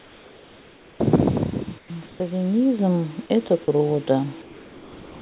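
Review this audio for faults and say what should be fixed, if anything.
Comfort noise in place of the background fills the pauses from 0.0 to 1.0 s, 1.78 to 1.9 s, 2.06 to 2.2 s and 4.42 s to the end. The real room background turns into a steady, featureless hiss about 3 to 7 dB quieter, likely because discontinuous transmission stopped sending between phrases. Unlike a dropout, nothing audible is cut; only the background texture changes. Disabling DTX on the sender would keep the true background throughout.

The microphone volume is stepped up at 2.79 s. Speech and background jump by about 6 dB together in a single instant, where a fade or compressor would ride the level gradually or move only the voice. Fixing the input gain rather than letting automatic gain control adjust the device would prevent it.

Sound is dropped by the voice detector at 3.26 to 3.30 s and 3.64 to 3.68 s. About 20 ms of speech disappears in each case and is replaced by the same flat noise, likely because the detector misjudged the sound as background. 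This differs from the pause-filling comfort noise because actual speech goes missing. Adding a longer hangover time to the detector, or lowering its threshold, would stop it.

Nothing above 4 kHz comes through, which fits the G.711 call codec.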